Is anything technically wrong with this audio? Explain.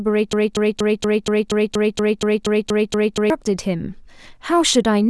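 Yes. From 0.33 to 3.30 s there is a broken-record loop, likely from a stalled player resending its last buffer: a 0.24 s slice of speech repeats 13 times, replacing the audio that belonged there.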